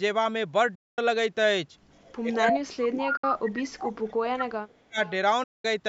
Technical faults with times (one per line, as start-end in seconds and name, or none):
0.75-0.98 Bluetooth dropout
1.94-2.53 echo leak
2.23-3.46 speech suppressed in double talk
3.17-3.24 Bluetooth dropout
3.76-4.99 speech suppressed in double talk
3.91-3.99 echo leak
4.39-4.45 echo leak
5.06-5.12 echo leak
5.43-5.65 Bluetooth dropout